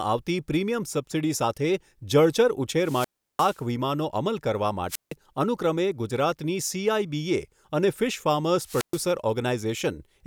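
Wireless microphone squelch dropout: the FM radio link fades and the receiver mutes, so hiss rises and the speech cuts to near-silence at 2.77–3.63 s (350 ms mute), 4.88–5.14 s (160 ms) and 8.62–9.09 s (120 ms).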